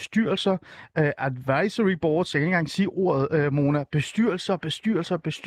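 No technical faults can be heard in the speech, and the Opus voice compression leaves only a light trace, keeping the full audio band with a character that fits its hybrid mode at around 24 kbps.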